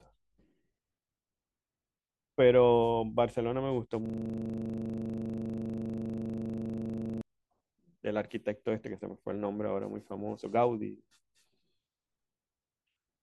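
From 4.06 s to 7.21 s the speech gives way to a system hang loop. The host stalled while the audio hardware kept replaying the same 40 ms stretch of its ring buffer, which points to a buffer about that long. Each cycle repeats identically at 25 Hz, so the result is a hard, rattling buzz rather than a rhythmic stutter. That exact, unchanging repetition distinguishes it from dropout clicks or jitter, where the audio gaps or wavers instead.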